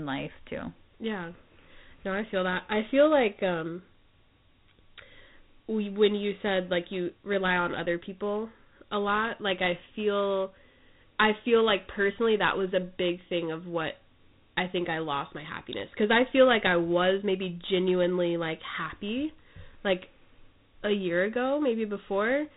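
Throughout, Dialogic VOX ADPCM coding: nothing above 3.9 kHz, fitting 4-bit 32 kbps, and a plainly audible gritty hiss that tracks the speech, unlike steady background noise.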